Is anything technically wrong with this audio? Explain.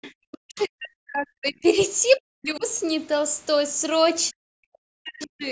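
Yes. Other side's voice leaking through is audible at 0.02 to 0.12 s and again at 0.59 to 0.65 s. The canceller left a residue of loudspeaker playback in the microphone, about 20 dB and then about 30 dB below the talker. It comes through as faint scraps of a second voice, likely from incomplete echo cancellation.

Speech suppressed in double talk appears at 0.11 to 1.65 s, 2.17 to 2.64 s and 4.3 to 5.44 s. With both sides active at once, the processing couldn't tell the talker from the echo and pulled the microphone signal down, by roughly 40 dB at the deepest. The voice dips and breaks into pieces across these stretches, likely because double-talk detection failed. The call's microphone processing also limits the audio to 8 kHz at the top, which is normal.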